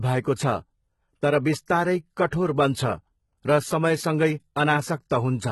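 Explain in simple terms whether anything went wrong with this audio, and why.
The high end of the speech sounds gritty and metallic throughout, with s sounds turning lispy and nothing in the treble above about 11.8 kHz. That is heavy HE-AAC compression, which likely rebuilt the treble by copying lower sound upward instead of keeping the original.

At 2.27 to 2.32 s, and again briefly at 5.10 s, a short hiss arrives just before a sharp attack, which then sounds soft and smeared. This is pre-echo: the codec spreads its noise across a whole block, so the noise leaks into the quiet moment before the attack.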